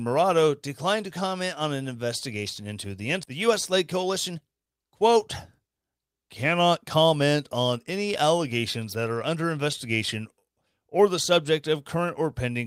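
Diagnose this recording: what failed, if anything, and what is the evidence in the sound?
Right after "an investigation into the", at 3.23 s, the speech jumps forward with no gap and no filler, so about a second of talk is simply absent and the two sides butt together. This is a skip ahead at the network and jitter buffer stage: the buffer had overfilled with late audio, and the receiver discarded the backlog of roughly one second to pull latency back down, joining the remaining audio almost directly.

From 3.33 s to 5.16 s the speech runs hurried, about 123% of normal speed, yet the pitch stays where it was, so it sounds rushed rather than chipmunk-like. That points to a jitter buffer speed-up in the same receive stage. With more audio queued than its target, the buffer repeatedly cut out short pitch-period-sized slices, roughly 0.4 s in total, to shrink the delay without shifting pitch.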